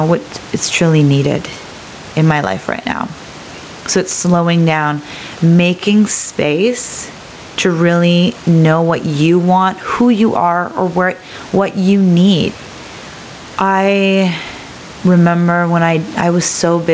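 Gain pumping throughout: the gain swings around 10 dB under loud speech, likely from excessive gain into a fast limiter. A gate would silence pauses instead.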